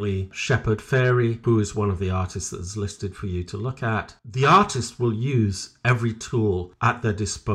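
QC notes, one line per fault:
No faults detected on this speech clip.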